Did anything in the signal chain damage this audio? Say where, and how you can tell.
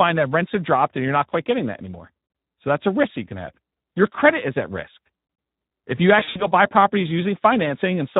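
Yes. At the codec stage, Speex encoding runs through the whole clip, and the damage is plainly audible. The speech sounds noisy and hoarse, which fits a bitrate of about 11 kbps. With so few bits for the excitation, the CELP coder models the voice only roughly.

At the network stage, there is VoIP packet loss concealed by the speech codec from 6.19 to 6.48 s, just before "buy properties". About 120 ms went missing across 160 ms, with the longest gap lasting 60 ms. The decoder stretched the last pitch and filter into a fading buzzy tone or coloured noise, and the speech stays distorted briefly after the loss.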